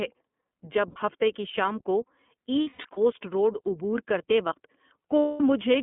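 Throughout the speech, the iLBC codec limits the band to roughly 200 Hz to 3.5 kHz and leaves a plainly audible rough, synthetic edge. The 30 ms framing fits its 13.33 kbps mode. Unlike a simple telephone band-pass, which stays smooth, the coarseness here is in the voice texture itself.

Lost iLBC frames come next, at 0.90 to 0.97 s, just before "ہفتہ کی شام کو". About 60 ms, consistent with two frames, is filled by a brief buzzy held vowel.

From 2.61 to 2.98 s, after "ہفتہ کی شام کو", roughly 210 ms of loss is scattered across 360 ms, with the longest run around a tenth of a second, giving stuttering bursts of concealment.

At 5.21 to 5.41 s, after "کرتے وقت", a continuous 210 ms gap becomes a fading, breathy sustained tone.

These losses differ from silent dropouts or clicks because the gaps are bridged by repeated pitch. The voice also comes back clean at once, without the lingering smear that codecs relying on earlier frames leave after a loss.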